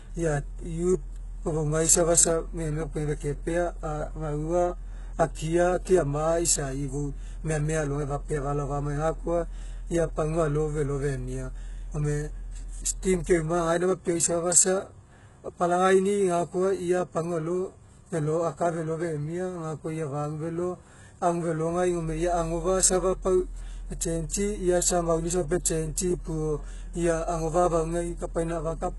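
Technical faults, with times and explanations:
Throughout, HE-AAC compression: the speech carries heavy codec damage, and nothing is present above 11.5 kHz. The likely cause is HE-AAC at a very low rate; the sound fits roughly 12 kbps. Only the lower spectrum is truly coded. The treble is rebuilt by copying lower bands upward under a coarse envelope, so the top end sounds synthetic. Its harmonics don't align with those below, which leaves sibilants gritty, lispy and metallic.
5.35 s, pre-echo: a brief hiss of about 15 ms leads into a sharp onset, and the attack itself sounds softened and smeared. The codec spreads quantisation noise evenly across its transform block. Because this transient lands late in the block, noise sized for the loud attack also spills into the quiet instant just before it. That spill is heard as a short hiss arriving ahead of the sound.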